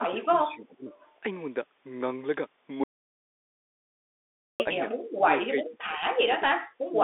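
The whole clip of speech carries the sound of the Bluetooth CVSD headset codec. The line is squeezed into roughly 300 Hz to 3.6 kHz, and nothing above 3.8 kHz survives. The damage is plainly audible: s sounds turn scratchy, loud bright syllables smear where the one-bit, 64 kHz up-or-down steps can't keep pace, and a fine granular hiss sits under the voice. That grain is what separates it from a simple low-pass or a plain narrowband line.

From 0.0 to 0.94 s the voice sinks by about 15 dB. This is speech suppressed in double talk, likely an echo canceller turning down the near talker while the far side was also speaking. The voice dips rather than vanishing outright, which separates it from a dropout.

Between 1.0 and 1.12 s there is an echo leak: a very faint repeat of the voice, about 40 dB down, trailing the original by 357 ms. It is likely residual loudspeaker echo that the far-end canceller let through. 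A distinct, delayed scrap like this is different from room reverberation, which would blur continuously into the sound rather than return as a separate copy.

At 2.84 s the sound stops dead, and it resumes at 4.6 s after 1.76 s of audio dropout to silence. The gap is silent with no room tone, pointing to a likely lost input while recording continued. That deadness is what marks it apart from suppression, which leaves residue.

Later the suppression returns in short bites, cutting up to about 30 dB: 5.14 to 5.3 s, 5.48 to 5.98 s, 6.15 to 6.29 s, 6.49 to 6.55 s, and 6.87 s to the end. The speech flickers down and back in pieces.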